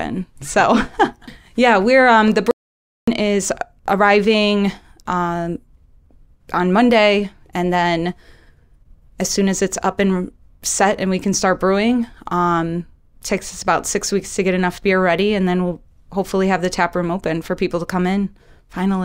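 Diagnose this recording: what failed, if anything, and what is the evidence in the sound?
Audio dropout to silence from 2.51 s to 3.08 s: the speech cuts off just after "yeah we're um the" and resumes mid-flow at "is arriving um", with about 0.57 s of complete silence between, not even room tone. That points upstream of the recorder, likely a lost input link, disconnected device or momentary mute, while the recording or encoding stage kept writing silence. Whatever was said in that gap is unrecoverable.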